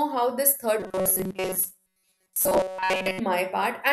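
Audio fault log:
0.80 to 3.20 s, robotic sound from repeated short buffers: the speech turns into a rigid, metallic buzz that still roughly tracks the words. The buzz sits at a fixed 188 Hz. That pitch fits a block of about 5.3 ms being played again and again. Most of the real audio in this span is skipped. The likely cause is new audio arriving too seldom, with the last short buffer repeated to fill the gaps.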